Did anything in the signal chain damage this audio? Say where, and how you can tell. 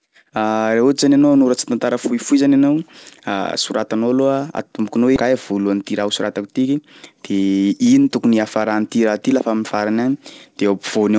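Yes. In the jitter buffer, a skip ahead at 5.16 to 5.18 s discarded about 0.4 s of queued audio, so the speech jumps forward with no gap.

Right after, a jitter buffer speed-up from 5.26 to 6.80 s trimmed repeated pitch periods, removing about 150 ms. The speech runs 10% faster at unchanged pitch and sounds hurried.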